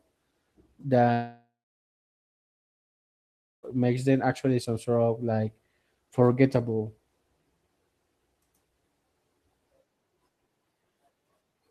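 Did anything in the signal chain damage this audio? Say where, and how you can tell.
Yes. From 1.13 s to 3.65 s the speech breaks off. The last sound is drawn out briefly as a fading buzz, and then about 2.1 s of near-silence follows. When the speech returns, roughly 2.5 s of material is simply gone. This is most likely a long network dropout. The packets stopped arriving, and the receiver's concealment stretched the final frame until it gave up. A local mute or storage gap would cut off cleanly, with no fading synthetic tail.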